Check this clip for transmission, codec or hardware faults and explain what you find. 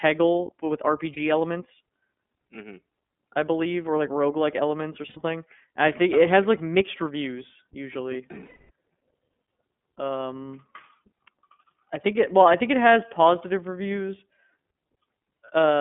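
Two problems show up in this speech: the whole clip has been through the iLBC codec, and a few iLBC frames drop out along the way.

The iLBC codec damage runs throughout. The audio is squeezed into a telephone band of about 200 Hz to 3.5 kHz, with a rough, slightly synthetic edge. iLBC codes each frame's excitation on its own, and the 30 ms framing fits its 13.33 kbps mode.

The lost iLBC frames occur at 1.13 to 1.18 s, 5.09 to 5.17 s, and 8.45 to 8.71 s. The decoder fills each gap by repeating the last pitch cycle mixed with noise, which gives a held, buzzy vowel. The third gap, about 240 ms long, fades. Because the frames stand alone, the speech recovers almost immediately afterward.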